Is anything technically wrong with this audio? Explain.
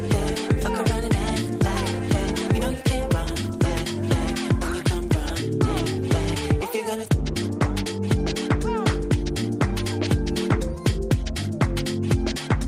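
No, nothing is technically wrong with this audio.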